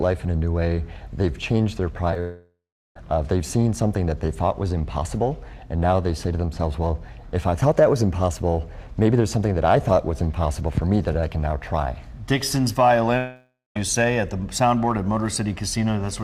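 Packets arriving too late at 2.11 s and 2.14 s were concealed by extending the preceding audio, leaving two brief smears of about 10 ms each. From 2.20 to 2.96 s a likely network dropout left about 0.76 s missing: the continued sound fades to roughly 0.38 s of silence before the audio resumes, with that stretch lost. The same happens from 13.17 to 13.76 s, likely another dropout, where 0.58 s goes missing and about 0.2 s of it is silent.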